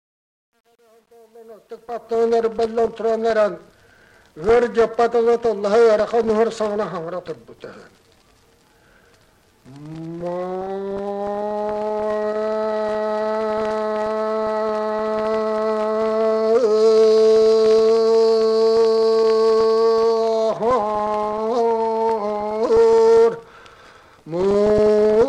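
From 0.0 to 2.24 s the fade-in carries truncation distortion: the gain stage appears to keep too few bits without dither, which points to roughly 9-bit resolution. Worst up to 1.73 s, the quiet rise sounds gritty.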